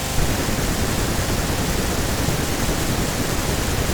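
Speech recording with no audible technical faults.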